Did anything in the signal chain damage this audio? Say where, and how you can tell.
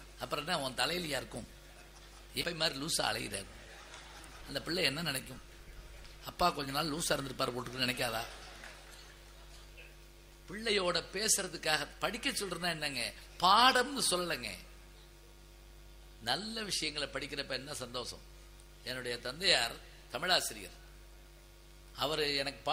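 Yes. A skip ahead at 2.41 s, at the network and jitter buffer stage: around 0.4 s of audio is missing, and the two sides are butted together with no gap or fill. A stretch of audio was dropped while later audio was already waiting, dropping the delay by a similar amount.

A jitter buffer speed-up runs from 3.43 to 5.23 s: the audio plays about 4% fast at unchanged pitch. The receiver trimmed short pitch-period slices repeatedly, about 70 ms in total, to drain excess buffered delay.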